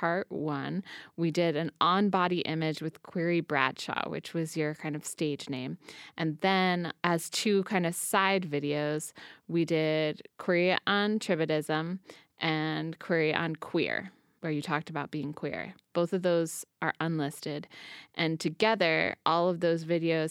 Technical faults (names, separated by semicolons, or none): none